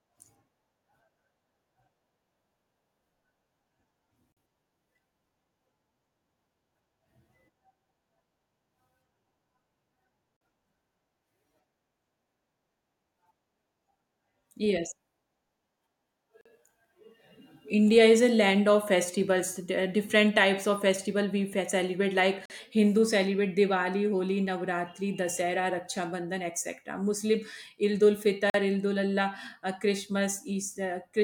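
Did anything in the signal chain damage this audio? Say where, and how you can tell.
Yes. There are gaps between chunks at the storage or playback stage. The audio is handled in 6-second chunks, and 44 ms of silence is inserted at each join, so nothing is lost. Short holes fall at 4.32, 10.37, 16.41, 22.46 (just after "celebrate like") and 28.50 s.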